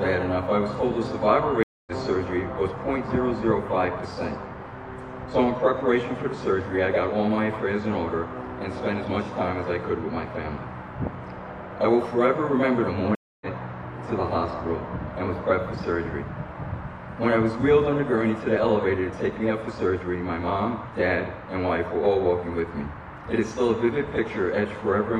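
Stream reconnects occur at 1.63 to 1.92 s and 13.15 to 13.46 s. Each time the connection drops, leaving about 0.24 s and 0.26 s of silence. A fresh decoder then picks up mid-stream, fading in roughly 0.2 s and 0.3 s later, so sound is skipped.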